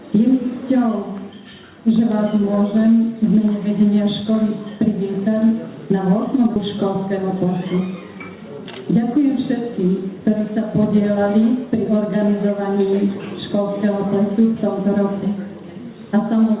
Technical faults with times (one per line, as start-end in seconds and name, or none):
6.56-6.58 skip ahead
6.84-8.66 jitter buffer speed-up